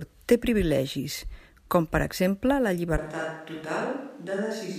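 At 2.98 s, right after "com per exemple la", the speech abruptly turns roomy and hollow, loses low end, drops roughly 5 dB and gains audible room noise around 35 dB below it to the end, likely a switch to a distant microphone.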